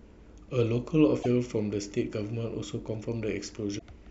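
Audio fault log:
1.19–1.26 s and 3.75–3.82 s: damaged data in a compressed stream. At each point the speech breaks up briefly for about 70 ms, because corrupted bytes leave the decoder misreading frames and losing sync until it finds a valid frame header. On a spectrogram each event appears as a narrow vertical disturbance that cuts through the harmonic bands. On the waveform it shows as an abrupt, irregular patch that doesn't match the surrounding envelope.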